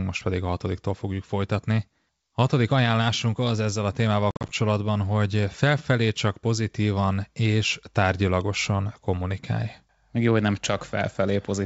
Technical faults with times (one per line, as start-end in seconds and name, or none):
4.31-4.51 packet loss on an ADPCM call